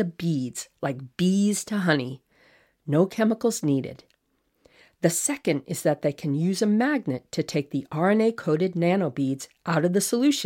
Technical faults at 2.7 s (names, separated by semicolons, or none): none